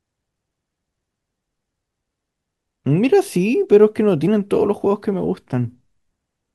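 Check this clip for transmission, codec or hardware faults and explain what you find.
Two tiny skips break the speech at 2.28 s and 4.27 s, each a point where the waveform jumps. This is overlap between stream segments. The 2-second segments carried overlapping time stamps, so the player trimmed a few milliseconds of genuine sound at each of these two points.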